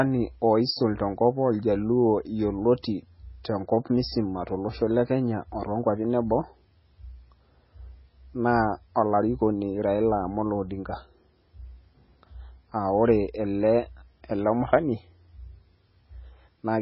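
Speech running through the whole clip is carried on heavily damaged audio with the marks of MP3 compression. Nothing is left above about 5.6 kHz, so the sibilants lose their edge and the sound turns dull, watery and swirly, with metallic chirping on s sounds. The damage fits a very low bitrate near 16 kbps, the likely cause being an encoder short of bits that cut the treble and dropped weak frequency lines from frame to frame. On a spectrogram this shows as a hard flat ceiling near 5.6 kHz, with patchy holes below it that flicker on and off.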